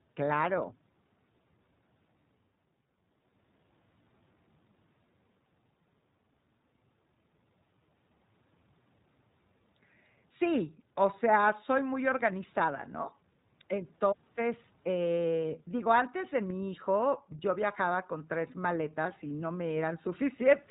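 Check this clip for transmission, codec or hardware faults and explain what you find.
There's one fault, and it runs the whole way through: the speech has gone through the iLBC codec. Everything above 3.8 kHz is missing, so it sounds narrowband. Each 20 ms frame's excitation is coded on its own, and that leaves a plainly audible rough, slightly synthetic edge, which fits the 15.2 kbps mode.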